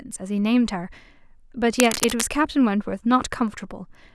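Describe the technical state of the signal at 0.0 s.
At 0.0 s the signal is intact, with no audible fault at that moment.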